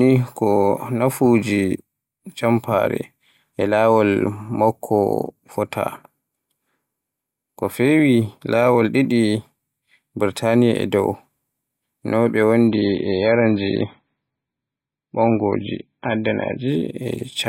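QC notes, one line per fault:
12.68–16.68 s, adaptive stream at a lower bitrate: right after "no ɓe" the speech turns dull and swirly, with nothing above 5.2 kHz and no gap at either edge. The stream briefly switched to a lower-bitrate version, consistent with MP3 dropping from around 128 to 16 kbit/s.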